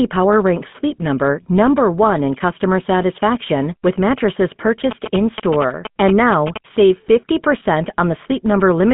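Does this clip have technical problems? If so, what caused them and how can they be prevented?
Yes. Throughout, the speech carries GSM full-rate codec damage: a buzzy, gravelly roughness from pulse-driven vocal-tract modelling, band-limited to about 150 Hz to 3.5 kHz with nothing above 3.8 kHz, which fits a 13 kbps GSM link. Prevent it by capturing through a wideband path instead of the phone network.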